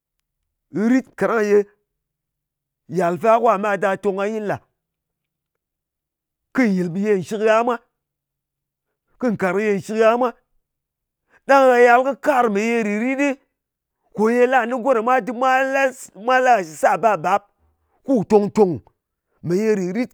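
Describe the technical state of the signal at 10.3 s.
At 10.3 s the speech signal is intact, with no audible technical fault at that moment.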